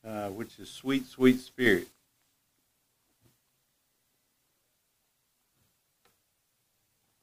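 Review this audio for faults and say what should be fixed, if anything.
There's a sudden gain jump at 1.66 s: the level steps up by about 6 dB in a single sample, background noise included, and holds until 1.92 s. That's likely a gain setting or bit shift applied with no ramp. Smoothing every gain change over a few milliseconds would stop it.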